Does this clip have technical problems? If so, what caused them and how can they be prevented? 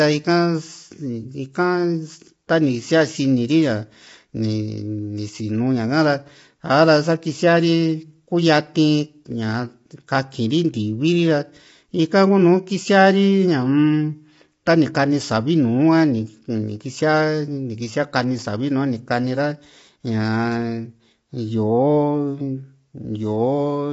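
Yes. Throughout, the speech sounds rough and grainy and has nothing above 7.7 kHz. A spectrogram shows a hard ceiling there, with smeared noise filling the gaps between harmonics. The likely cause is low-delay AAC compression (AAC-ELD), whose short frames resolve pitch poorly at a bitrate around 24 kbps. Sending the call at a higher bitrate, or using a codec mode with longer frames, would prevent it.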